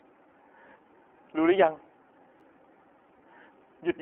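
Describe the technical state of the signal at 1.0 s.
iLBC codec damage runs through 1.0 s and the whole clip: each 30 ms block is coded independently, which fits 13.33 kbps iLBC, leaving speech plainly rough, synthetic and confined to roughly 300 Hz to 3.4 kHz.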